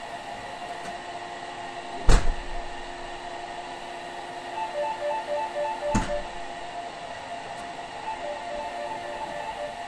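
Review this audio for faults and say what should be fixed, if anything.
Two Bluetooth SBC bit pool drops occur, from 0.94 to 3.75 s and from 5.95 to 8.61 s. In both, the treble dulls and a gritty noise rises, then clears when the rate recovers. This points to a congested link forcing the SBC bit pool down from about 28 to about 13, roughly 102 kbps, starving the upper sub-bands and coarsening the rest. Reducing link congestion or interference, or pinning a higher minimum bit pool, would prevent it.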